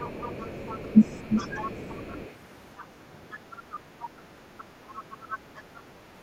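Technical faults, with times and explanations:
0.0–2.31 s, 2.78–2.85 s, 3.31–3.37 s, 3.71–4.06 s and 4.58–5.8 s: other side's voice leaking through. A faint second voice, roughly 25 to 30 dB below the main speech, sits underneath it. This is likely residual loudspeaker echo the canceller failed to remove. Unlike room reverb, it carries separate speech rather than a tail of the talker's own.
0.92–0.99 s: speech suppressed in double talk. During the leak, the talker's own voice dips by about 15 dB for a brief 70 ms stretch. The echo canceller likely clamped down while both sides overlapped. It is a momentary duck tied to the overlap, not a dropout or a gap in transmission.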